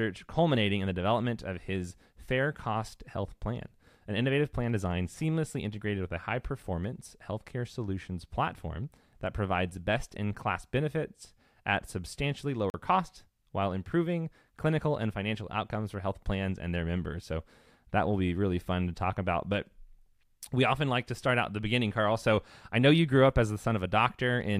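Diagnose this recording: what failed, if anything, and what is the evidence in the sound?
The driver or buffer stage failed to deliver audio in time: a block of digital silence, 40 ms long, replaces the speech from 12.70 to 12.74 s. The gap points to the output buffer not being filled before playback needed it, so the samples were left at zero. The speech is cut off with no fade and resumes just as abruptly, leaving a short, dead hole in the speech.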